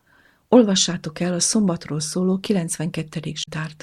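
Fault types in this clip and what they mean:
Damaged data in a compressed stream: near the end of the speech, from about 3.40 to 3.48 s, a brief chirp, squawk, click or short hole of roughly 90 ms breaks into the sound. Part of the compressed data at that point was corrupted, so the decoder misread those frames, lost its sync with the stream and had to hunt for the next valid frame header before normal decoding could resume.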